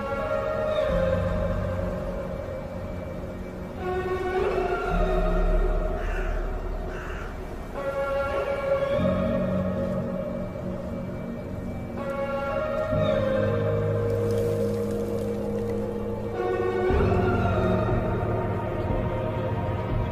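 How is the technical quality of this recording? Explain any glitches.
No technical faults can be heard anywhere in the recording, so the signal arrives intact throughout.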